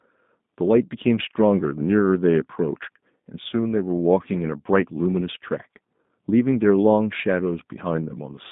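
From the first syllable to the end, the speech carries G.729 codec damage, the signature of an 8 kbit/s VoIP link. The band sits at about 150 Hz to 3.7 kHz, so nothing above that survives. Each 10 ms frame is rebuilt from a vocal tract filter, a pitch predictor and a sparse set of pulses rather than the original waveform. The result is plainly audible: intelligible, but rough and somewhat synthetic throughout.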